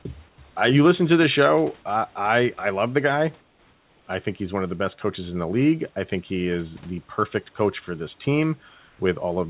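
In the pauses at 0.29 to 0.38 s, 3.41 to 4.07 s and 8.69 to 8.99 s, the room's background gives way to comfort noise in place of the background. The sender likely stopped transmitting during silence, and the receiver filled each gap with synthetic hiss. It sounds flat and featureless, without the room's texture. Each gap is quieter than the real background: by about 6 dB, then about 3 dB, then about 1 dB.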